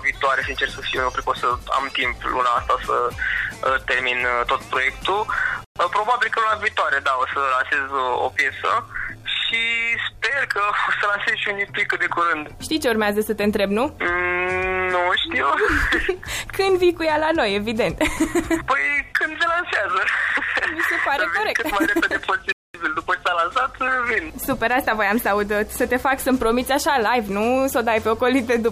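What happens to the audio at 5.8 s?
A Bluetooth stall runs from 5.64 s to 5.76 s, ending just before the moment asked about. The sound drops abruptly to silence for about 113 ms, then carries on again. The likely cause is radio interference on the wireless link: packets arrived late, the headphones' playback buffer emptied with nothing left to play, and output stayed muted until the delayed data was resent and got through.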